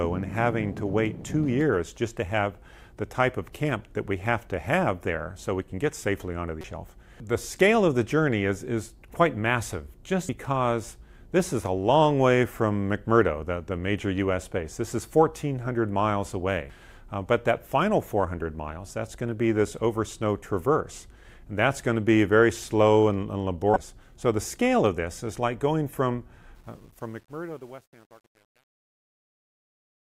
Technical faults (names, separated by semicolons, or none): damaged data in a compressed stream; truncation distortion on a fade